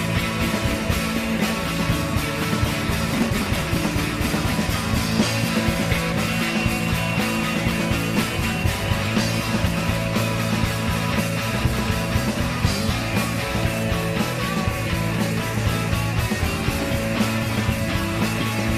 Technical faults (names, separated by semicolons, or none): processor overload crackle